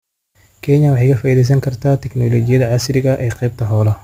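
Throughout the speech, a crude rate conversion dropped samples by nearest-neighbour picking with no filtering, a pattern that fits a 48 kHz to 44.1 kHz change. The repeating timing error leaves an inharmonic, gritty fizz roughly 35 dB below the speech, following its louder and brighter sounds.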